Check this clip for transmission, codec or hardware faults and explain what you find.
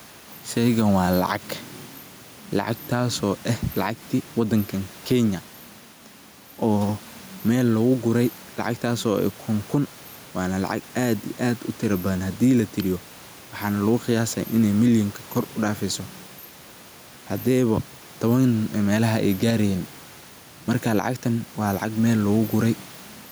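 One fault runs through the whole clip: gain pumping. The room noise sits about 28 dB below the speech, and the gain swings roughly 5 dB, flattening the dynamics. The likely cause is input gain set far too high, with a fast limiter pulling it down on every peak.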